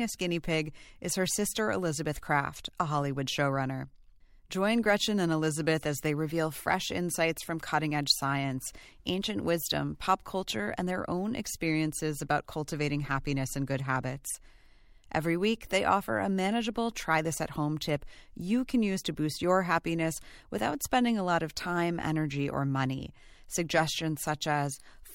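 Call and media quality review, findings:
Nothing to flag on this one; I listened all the way through the speech and didn't hear any faults.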